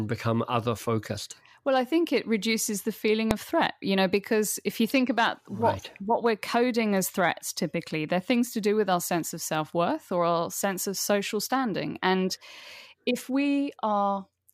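At 3.31 s the speech is interrupted by a single sharp bang, the signature of invalid numbers at full scale. A calculation in the processing chain produced infinite or undefined values, and these were forced to the maximum sample value for a block of about 0.67 ms, which fits a 32-sample buffer. Because the block is so short, the separate pops at its start and end merge into one bang. An ordinary click from a waveform discontinuity is quieter and scales with the signal. This bang sits at one extreme value, far beyond the speech peaks, regardless of what precedes it.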